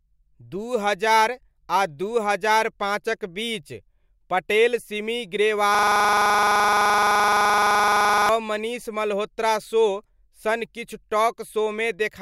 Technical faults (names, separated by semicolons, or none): system hang loop